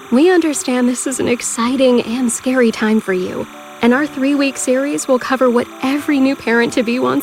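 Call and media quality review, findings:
Timecode bleed, whole clip: faint chirpy warble sitting behind the sound, roughly 25 dB down, flipping between tones near 1 and 2 kHz. Looks like LTC from a neighbouring track or cable leaking in, running at 30 frames/s.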